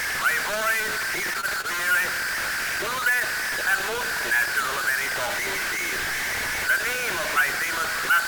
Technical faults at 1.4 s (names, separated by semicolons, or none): low bit depth without dither; short stall from a late packet